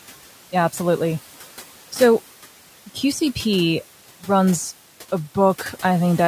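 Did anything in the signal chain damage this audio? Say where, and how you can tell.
Yes, in the call processing stage: there are noise suppressor artifacts running the whole way through. The room noise, sitting about 18 dB under the speech, drops by about 11 dB in the gaps and then climbs back up underneath whenever speech comes in. That pumping gives it away. The suppressor is gating its per-band attenuation on what it judges to be steady background, frame by frame, so the noise floor tracks the talking instead of staying put.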